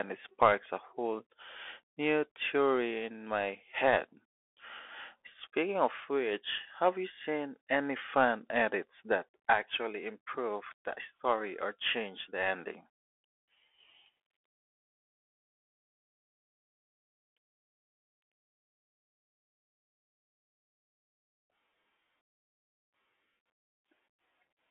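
Speech heard through a Bluetooth CVSD headset codec from start to finish, with plainly audible codec damage. The band is narrowed to a telephone-like 250 Hz to 3.4 kHz, and nothing survives above 3.8 kHz, so a spectrogram shows a hard ceiling with empty space above it. The codec encodes each sample as a single up-or-down step of adaptive size, which fits a 64 kbps stream. Loud high-frequency peaks outrun that step and distort, sibilants turn scratchy, and a granular hiss lies under the speech.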